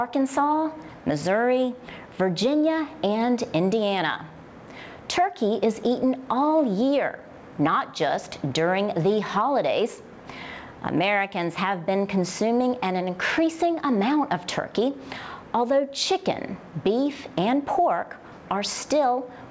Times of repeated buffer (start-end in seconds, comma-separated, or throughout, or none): none